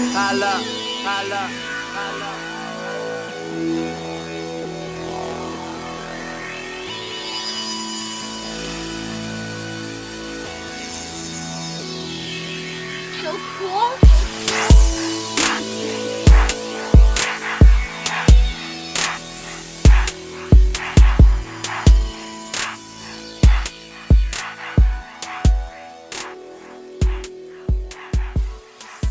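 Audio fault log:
throughout, aliasing: the audio was downsampled without an adequate anti-alias filter. The spectrum runs right up to a band edge at 8 kHz, which points to a new sample rate of about 16 kHz, likely reduced from 44.1 kHz material. Energy that lay above 8 kHz was not removed. It mirrors back below that edge as inharmonic components unrelated to the source, at roughly 15 dB below the signal, giving high-frequency content a gritty, metallic edge.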